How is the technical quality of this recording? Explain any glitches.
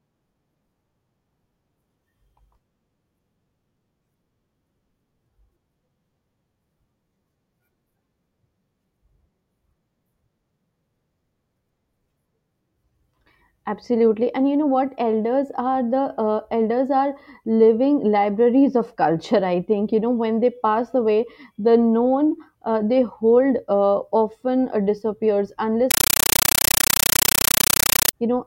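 The recording carries one serious glitch near its end. From 25.91 to 28.13 s, just after "uh disappears", the speech gives way to a compressed stream played as audio. An AC-3 bitstream was read as plain samples instead of being decoded. Each frame becomes a 9.33 ms burst of noise followed by silent padding, repeating at 31.25 Hz, which fits a 448 kbps stream. The result is a very loud, chattering static. Unlike random digital noise or a dropout, it has a steady mechanical stutter at about 31 bursts a second.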